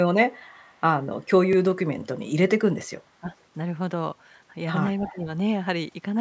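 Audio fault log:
0.31–0.81 s, 3.29–3.35 s and 5.05–5.16 s, echo leak: a faint delayed copy of the speech trails the original by 289 ms. It is about 40 dB below the speech at first, then rises to about 30 dB below and finally about 20 dB below in the last event. This is likely a loudspeaker on the far end whose echo canceller let part of the played-back signal through its microphone and returned it as a ghostly repeat.
3.20–3.28 s and 5.09–5.27 s, speech suppressed in double talk: the speech briefly dips while the other side is also active. The first dip is short, under a tenth of a second, and drops by roughly 15 dB. The second is shallower, around 10 dB, and lasts about a fifth of a second, overlapping the loudest echo burst. The likely cause is the echo canceller failing to tell the local talker from loudspeaker echo and turning everything down together.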